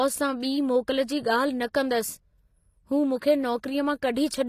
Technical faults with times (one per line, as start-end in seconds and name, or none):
0.00-4.48 HE-AAC compression